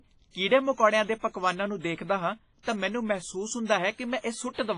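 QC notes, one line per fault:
throughout: WMA compression, likely the cause of the ringing, washy quality heard across the whole clip. The damage is heavy: the codec's long transform blocks smear quantisation noise over tens of milliseconds, and at a rate of around 24 kbps the weaker spectral lines are simply dropped to zero. Nothing is left above about 10.5 kHz, so the top end sounds dull, while a hiss rises and falls with the level of the speech.
2.63 to 2.67 s: pre-echo, a hiss of about 44 ms just before "ਤਾਂ ਮੈਨੂੰ ਮਹਿਸੂਸ". The sharp onset here falls late within a transform block, and the noise allotted for that loud attack is spread evenly across the whole block, including the quiet stretch in front of it. The result is a brief wash of noise that anticipates the onset, and the attack itself sounds softened and smeared rather than crisp.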